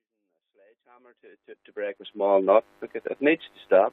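No technical faults are audible.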